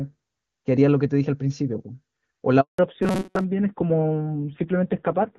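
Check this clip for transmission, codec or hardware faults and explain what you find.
Three faults appear, all from about 2.6 s onward.

Handover gap, 2.61 to 2.79 s: the network switch delivered no frames for 180 ms. The waveform drops to a flat line and the spectrogram shows a blank vertical band.

Fallback to narrowband, 2.79 s to the end: the call left HD Voice for a low-rate narrowband codec. Everything above 4 kHz disappears on the spectrogram, and the speech sounds duller and rougher.

Robotic sound from repeated short buffers, 3.03 to 3.44 s: the likely cause is audio arriving too seldom, with a roughly 5 ms segment looped over most of the stretch. This produces a rigid 188 Hz metallic buzz, which shows as evenly spaced horizontal harmonics and a repeating waveform shape.

Before the gap, the wideband codec sounds clean.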